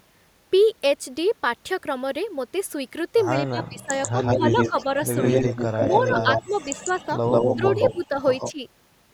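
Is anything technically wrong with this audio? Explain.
Yes, two related faults. Speech suppressed in double talk at 3.42–3.91, 4.35–4.77, 5.88–7.09 and 7.55–8.61 s is likely caused by an echo canceller that could not separate the near talker from loudspeaker echo and turned both down. The speech dips by about 20 dB in the first stretch and about 10 dB later.

Echo leak at 4.02–4.85 and 5.21–8.53 s likely comes from a loudspeaker path whose echo canceller left part of the microphone pickup in the signal. A copy of the speech trails 144 ms behind, at roughly the same level.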